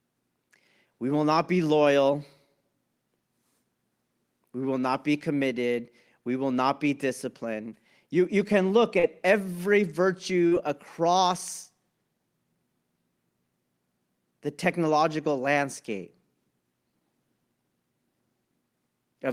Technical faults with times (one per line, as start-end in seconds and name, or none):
8.99-9.06 short concealed packet loss
10.47-10.54 short concealed packet loss